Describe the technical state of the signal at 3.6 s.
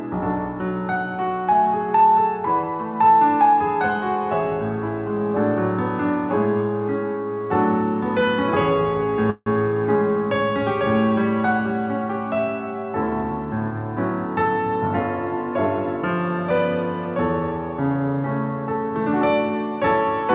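At 3.6 s the signal is intact, carried through the call path with its narrowband telephone-style sound and nothing above about 4 kHz, which fits a G.711 mu-law codec.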